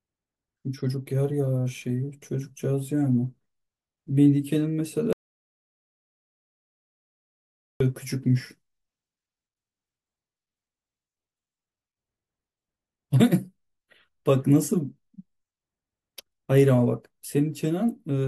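At 5.13 s the speech cuts to dead silence, no room tone at all, until 7.80 s: an audio dropout to silence, likely a lost input, with about 2.7 s gone.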